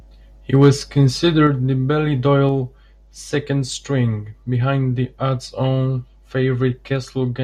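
Speech in which the loudest stretch, 0.55 to 0.69 s, turns harsh and crackly with flattened peaks; this is likely microphone overload, input driven about 3 dB past the converter's limit. Level then drops abruptly twice, by about 4 dB at 1.47 s and about 3 dB at 2.49 s, just before "second string behind the". These are likely microphone volume step-downs, with call software lowering input gain after the clipping.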